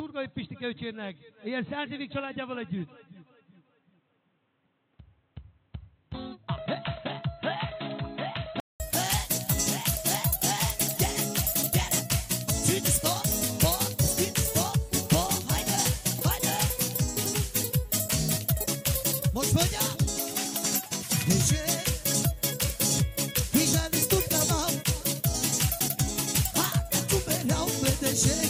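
From the start to 8.8 s the sound is dull and boxy, with nothing above 4.1 kHz. It is somewhat quieter and carries its own faint background noise. A 200 ms silence at 8.8 s gives way to full-bandwidth sound. The input was likely switched to a poorer device until then.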